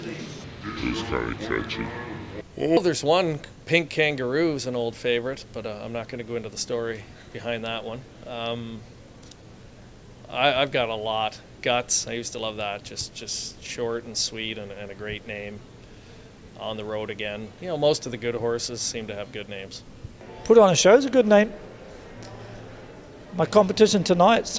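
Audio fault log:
0.44–2.77 s, wrong sample rate: the sound drops about seven semitones and slows to two-thirds speed, which fits 24 kHz material played back at 16 kHz without conversion.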